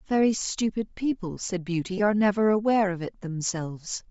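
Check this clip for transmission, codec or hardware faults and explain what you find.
Two kinds of fault are present: plainly audible codec compression across the whole speech clip, and two short dropouts from lost frames.

Bluetooth LC3 compression, throughout: the most likely cause is LC3 coding at a low rate, fitting about 32 kbps with 7.5 ms frames. The encoder discards much of the upper spectrum and replaces it with noise. The speech carries a plainly audible breathy, grainy edge.

Lost LE Audio frames, at 0.39 to 0.41 s and 1.98 to 2.00 s: the decoder covered each gap by reusing the previous spectrum with scrambled signs. The first gap lasts 22.5 ms, fitting three lost frames, and the second lasts 15 ms, fitting two. Each is brief.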